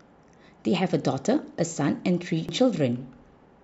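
At 2.49 s the speech is broken by a brief glitch. This is damaged data in a compressed stream. Some bytes in the encoded file were corrupted. The decoder misread those frames, lost sync, and had to find the next valid frame header.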